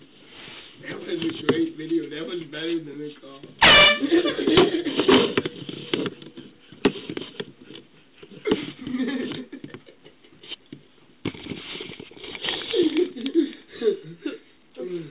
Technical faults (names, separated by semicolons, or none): aliasing